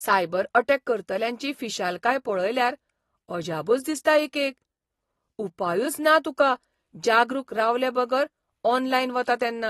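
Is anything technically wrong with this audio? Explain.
Yes. Throughout the speech, the sound is dull and smeared, with plainly audible warbling and fizz on sibilants. Nothing remains above 12.4 kHz. This is likely AAC compression. The coder discards spectral detail under bit pressure, which fits AAC-LC at roughly 32 kbps.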